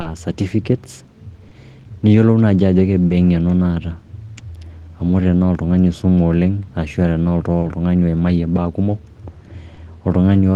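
Clock drift between sender and receiver runs through the whole speech clip, with the sender's clock about 2% slow, so the jitter buffer keeps draining and small timing hiccups recur at uneven intervals. A short stall from a late packet occurs at 0.01, 1.48, 3.07, 7.60 and 9.74 s. Each time the buffer empties, and the last sound is held for about 30 ms with nothing lost, giving a faint buzz or dip. On a spectrogram, each stall shows as a brief run of frozen, horizontally smeared harmonics. From 4.68 to 6.90 s, repeated timing corrections play the audio at 98% speed and add roughly 70 ms in small, unevenly spaced repeats. A waveform shows tiny duplicated segments along that stretch.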